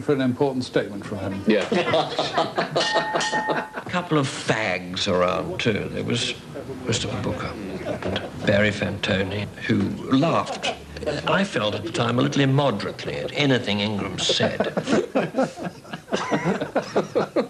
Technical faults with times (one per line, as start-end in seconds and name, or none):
none